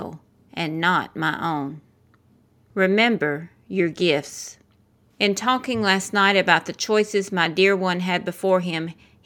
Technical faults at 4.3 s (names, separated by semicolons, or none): none